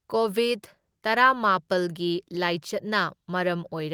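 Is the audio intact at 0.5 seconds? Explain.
Yes, the speech at 0.5 seconds is intact, with no dropout, click, distortion or other fault at that moment.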